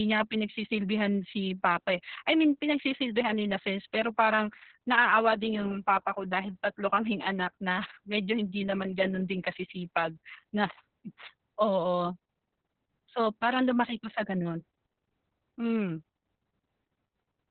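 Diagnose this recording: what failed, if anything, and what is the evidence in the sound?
The speech sounds muffled, hoarse and faintly robotic from start to finish, with nothing above 4.2 kHz. This is Opus voice compression at the codec stage. The narrowband SILK coder, starved of bits (consistent with roughly 6 kbps), codes the excitation coarsely and discards the upper band.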